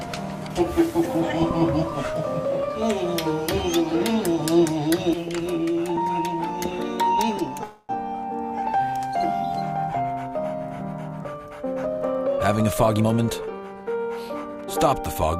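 From 7.63 to 7.91 s there is a call audio freeze, most likely packets held up in transit until the jitter buffer ran dry. The receiver stretches the last sound into a fading buzz for about 255 ms, then resumes where it stopped, losing nothing but running 255 ms later.

From 12.28 to 14.52 s a jitter buffer speed-up follows, as the receiver trims its surplus backlog by repeatedly cutting short pitch-period slices, roughly 0.3 s in total. The audio plays at about 111% speed with unchanged pitch, sounding noticeably hurried.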